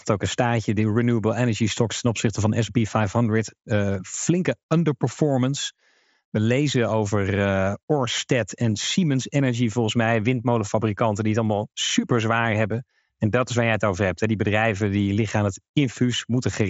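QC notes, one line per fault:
No fault to note; the speech comes over a Bluetooth mSBC headset link with nothing above 7.7 kHz.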